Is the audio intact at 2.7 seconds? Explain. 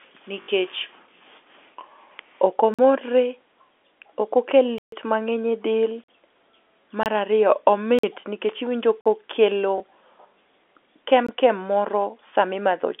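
No. A block of digital silence runs from 2.74 to 2.79 s: about 46 ms of samples, consistent with a 2048-sample buffer, go silent with no fade. This leaves a short hole.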